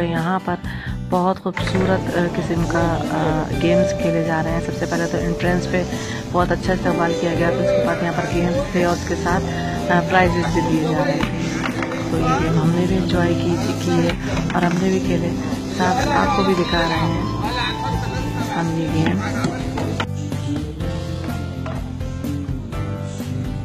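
From 5.81 s to the end, an adaptive stream at a lower bitrate takes over as the connection slows. Nothing remains above 14.9 kHz, pointing to a drop from 96 to 20 kbit/s. Unlike a dropout, the switch is sudden but gapless.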